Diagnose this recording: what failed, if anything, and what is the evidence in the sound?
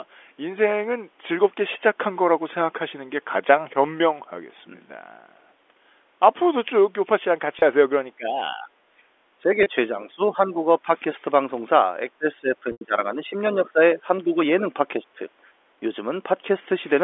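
At the network stage, packets were dropped and the receiver's concealment filled each gap by repeating the last pitch period, which is packet loss with pitch repetition. Single 30 ms losses at 7.59 s and 9.63 s come through as a brief held, buzzy sustain in the speech. A longer 90 ms gap from 12.72 to 12.81 s, which fits three consecutive packets, lets the repeated cycle fade toward silence before the speech cross-fades back in.

In the call processing, speech is suppressed in double talk. With both ends talking, the echo canceller was likely unable to tell the near talker from loudspeaker echo and attenuated the microphone path. The speech dips, dulls or breaks up from 8.17 to 8.7 s (about 15 dB at worst), 9.38 to 10.88 s (about 10 dB), 12.12 to 14.38 s (about 15 dB, the longest stretch, totalling around a second) and 14.74 to 15.2 s (about 10 dB).

Also in the call processing, the background is gated by the echo canceller. 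While far-end audio played through the loudspeaker, the canceller clamped the microphone, so the room sound briefly drops and then recovers when it releases. This happens at 8.98 to 9.1 s, by about 8 dB, and at 15.48 to 15.59 s, by about 7 dB, each dip lasting around a tenth of a second. All of this sits inside the narrow 300 Hz to 3.5 kHz band of the G.711 A-law line.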